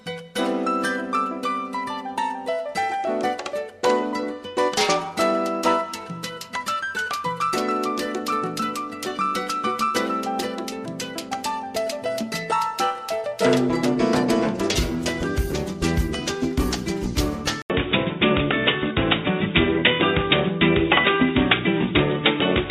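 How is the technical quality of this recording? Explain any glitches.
The recording has one clear glitch, beginning at 17.62 s and lasting to the end. The input was likely switched to a poorer device, such as another microphone or a headset's call profile. After a gap of 80 ms, the new path carries nothing above 3.8 kHz, so the sound turns dull and boxy. A faint new background noise sits well below the signal, and the level shifts by a few decibels.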